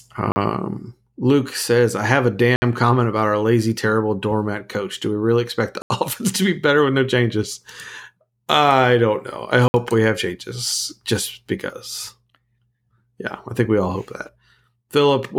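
The speech is broken by four blocks of digital silence: 40 ms at 0.32 s, 60 ms at 2.56 s between "says I have a" and "comment about our lazy", 80 ms at 5.82 s, and 60 ms at 9.68 s after "I don't know I". Each gap cuts out and back in with no fade, which points to unfilled output buffers rather than a network dropout smoothed by concealment.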